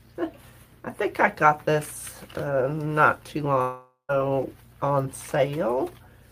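At 3.61 s a long network dropout begins. The sound smears into a fading buzz, goes silent, then resumes at 4.12 s, likely missing about half a second.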